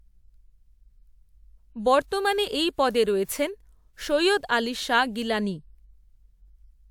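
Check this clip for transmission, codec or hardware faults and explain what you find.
Nothing stood out on listening to this speech recording that would point to a problem in how it was transmitted, encoded or captured.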